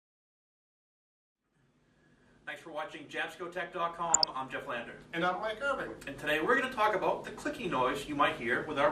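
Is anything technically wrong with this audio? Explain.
Yes, two faults. Throughout, MP2 compression, likely running short of bits at a rate consistent with about 80 kbps, switches off upper sub-bands, leaving the sound plainly dull and gurgling. From 4.08 to 4.29 s, DAB burbling: bit errors, roughly half a percent, slip past error correction into the MP2 data, causing bubbly noise blips in individual sub-bands.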